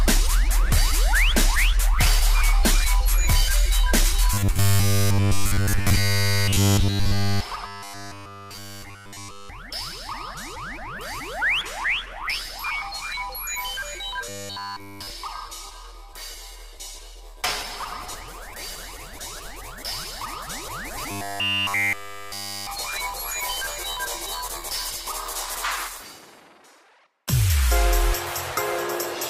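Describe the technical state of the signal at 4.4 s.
A rigid, metallic buzz fixed at 100 Hz, robotic sound from repeated short buffers, runs from 4.34 to 7.42 s, likely from a roughly 10 ms chunk looping throughout while fresh audio goes missing.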